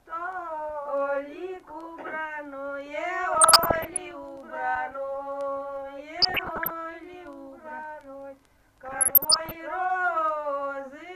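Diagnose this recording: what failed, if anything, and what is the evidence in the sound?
The failure is in the broadcast reception and codec stage: DAB burbling at 3.33–4.11 s, 6.18–6.70 s and 8.84–9.56 s. Residual bit errors of roughly 0.7 to 1 percent reach the MP2 data, corrupting scale factors so individual sub-bands jump in level for up to a frame.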